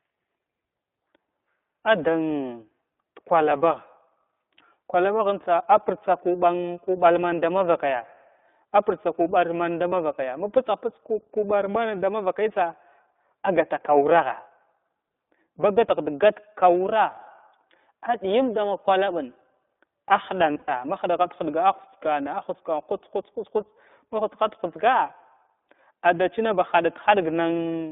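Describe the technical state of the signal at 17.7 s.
At 17.7 s the speech is still passing through the iLBC codec, as it does for the whole clip. The line is confined to roughly 250 Hz to 3.6 kHz, and each frame's excitation is coded independently, consistent with 20 ms frames and the 15.2 kbps mode. This gives a plainly audible rough, synthetic edge. A spectrogram shows a hard ceiling near 3.6 kHz with nothing above, and smeared, slightly blocky harmonic detail.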